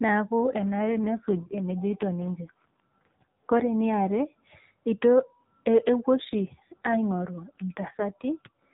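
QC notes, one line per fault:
0.58–4.37 s and 6.16–8.74 s, AMR rate drop: the speech turns rougher, buzzier and more synthetic, with no gap and no loss of band, and clears in between. This points to the AMR narrowband codec stepping down from 12.2 to 5.9 kbps, leaving fewer pulses to model each frame.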